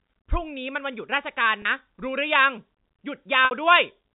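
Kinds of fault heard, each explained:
Packet loss with pitch repetition: Audio went missing, and the receiver filled each gap by repeating the last pitch period. At 1.62 s a 30 ms gap sounds like a brief buzzy hold. At 3.45 s a 60 ms gap fades toward silence before speech returns.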